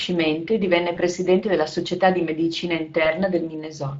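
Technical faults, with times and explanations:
throughout: Speex codec. The speech carries plainly audible coding damage, a noisy, hoarse grain laid over the voice. Speex models speech as a pitch predictor plus a spectral envelope filter driven by a coded excitation signal. At a rate around 20.6 kbps the excitation is coarsely quantised, so fine waveform detail is replaced by approximation, which is heard as roughness.
0.95 to 1.00 s and 3.03 to 3.11 s: VoIP packet loss concealed by the speech codec. The first gap falls between "e divenne" and "della società di medicina", the second just after "della società di medicina". Each is a single missing 20 ms frame. The decoder covers it by repeating its last pitch and filter at reduced gain, giving a brief buzzy or noisy, smeared patch. Because each frame depends on the previous one, the distortion lingers for tens of milliseconds past the gap.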